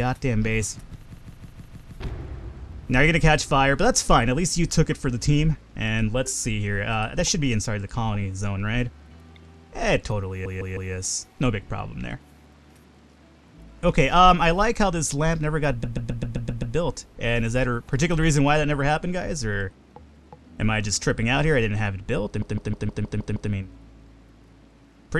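Repeated frames stutter the audio at 1.15–1.94 s, 10.45–10.92 s, 15.83–16.75 s and 22.42–23.51 s. Compressed data was sent twice or more, so a 157 ms block (131 ms at 15.8 s) replays three to seven extra times. The waveform shows identical copied segments.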